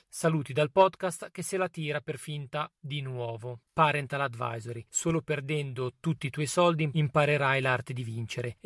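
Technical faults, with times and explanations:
No technical faults are audible in this speech recording.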